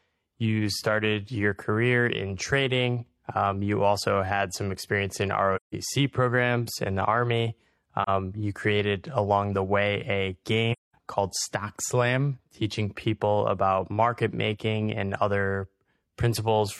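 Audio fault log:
5.56–5.74 s, 8.03 s–8.09 s, 10.72–10.95 s, AAC frame loss with muting: the speech drops out three times, for about 170 ms after "had some experience in" and before "programs in the", 43 ms before "you created along the", and 213 ms. The gaps fit roughly four, one and five lost AAC frames whose spectra the decoder zeroed. Overlapping transform windows fade the sound out and back in, so the holes are soft-edged, unlike a hard sample dropout.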